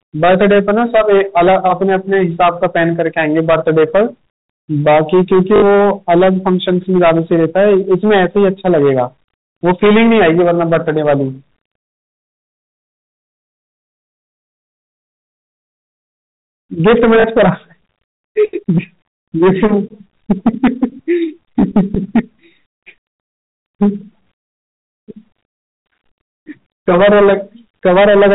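Hard clipping runs through the whole recording. The speech was driven about 15 dB beyond what one stage could pass, so the peaks are cut flat, with something like 7 percent of samples sitting against the ceiling. It is heard as a harsh fuzz on every loud syllable. On the waveform, the louder passages show square, flat-topped plateaus at the same level. On a spectrogram, vertical smears of harmonic energy rise from those bursts up to the 4 kHz edge of the telephone band.

At 5.56 s, 60 ms of packet loss with the last packet repeated breaks in. The receiver played the same short chunk again and again until fresh audio arrived. The repetition buzzes at a steady rate that fits 20 ms packets. A second, shorter stutter of 40 ms follows at 17.2 s. On the waveform, both show identical repeating segments with small jumps at each join. On a spectrogram, they appear as short, evenly striped blocks.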